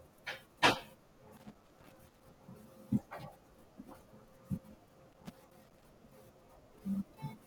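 From 1.37 to 2.23 s and again from 5.12 to 5.85 s, loose connector crackle breaks into the speech: a worn contact intermittently opens, chopping the signal into an irregular scratchy burst. The waveform shows jagged dropouts and spikes, and the spectrogram shows scattered broadband vertical streaks.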